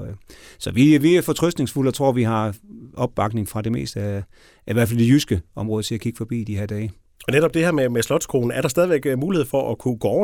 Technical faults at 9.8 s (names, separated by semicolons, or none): none